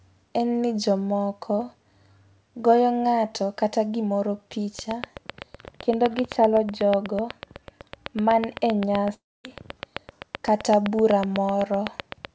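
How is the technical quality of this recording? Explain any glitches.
The recording has two clear faults, a steady ticking over the last 7.6 s and a brief gap where the sound drops out. The audio is also band-limited, with nothing above 8 kHz, which fits a G.722 call path at 64 kbps.

Train of clicks: from 4.79 s to the end, a regular ticking runs over the sound at about 7.9 clicks per second. It stays audible in pauses, and the peaks reach about 20 dB above the speech. The clicks are nearly identical and evenly spaced, so something is repeatedly injecting the same pulse into the signal. The likely cause is electrical interference from nearby equipment or a faulty connection or power supply.

Long network dropout: between 9.14 s and 9.46 s, about 0.3 s of audio goes missing. The last sound is stretched into a fading buzz, which then gives way to near silence, and the speech resumes with that stretch gone. 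This happens when packets stop arriving, so the receiver fills the hole by extending what it last had until there is nothing left to extend. The likely cause is a network interruption.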